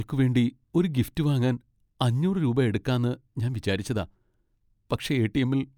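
Nothing technically wrong turns up anywhere in this short speech recording; there's simply no fault to report.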